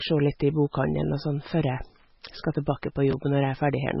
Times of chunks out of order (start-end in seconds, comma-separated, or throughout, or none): 3.11-3.13